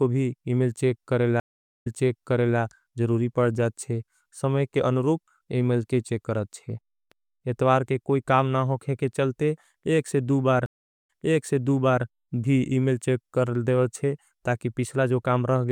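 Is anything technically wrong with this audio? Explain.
Yes, the speech has two stream reconnects, at 1.40 to 2.59 s and at 10.66 to 12.04 s. Each time the connection dropped, the player went silent, reconnected and started a fresh decoder mid-stream, with the server resending earlier audio. You hear a gap of about 0.43 s, then 0.39 s, after which the speech jumps back about 0.76 s, then 0.99 s, repeating what was just heard, its first instant muted or fading in.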